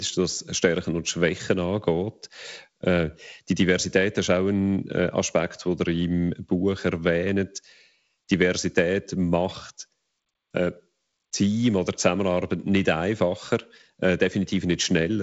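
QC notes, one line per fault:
No faults are heard in this speech clip. The G.722 wideband telephone coding path at 48 kbit/s is audible as a band limit with nothing above 7.7 kHz and light coding damage, with fewer bits left for the lower band at this rate.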